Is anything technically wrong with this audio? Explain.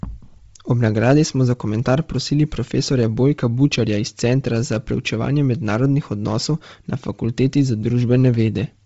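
Yes. Throughout the speech there is heavy damage that is likely Bluetooth LC3 compression: a low bitrate, fitting about 24 kbps, leaves nothing above 7.7 kHz and fills the upper band with breathy, grainy noise. Unlike a plain low-pass cut, the top is hissy rather than simply dull.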